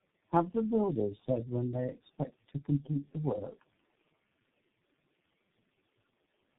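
Right through the speech you're hearing tandem speech coding: roughly three low-rate speech coders in a row, which fits a chain like iLBC, G.729A and G.723.1 with plain G.711 hops between them. Each one recodes the last one's damage, so the sound is rough, muffled and warbly, with nothing above about 3.8 kHz.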